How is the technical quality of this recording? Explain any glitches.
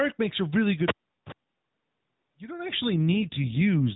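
The recording has one glitch: an AMR rate drop in its final second. From 2.95 s, right after "don't actually", to the end at 3.96 s, the AMR narrowband mobile codec steps down from 12.2 kbps to 5.9 kbps. The network makes this change to shift bits away from the vocal-tract model and toward error protection on a weak radio link. The bandwidth stays the same and nothing drops out, but the speech turns rougher, buzzier and more synthetic through to the end.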